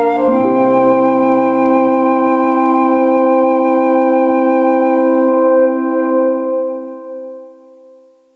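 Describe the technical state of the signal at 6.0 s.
At 6.0 s you're hearing gain pumping, which runs through the whole clip: the gain swings by about 20 dB, likely from a fast limiter fighting excessive gain.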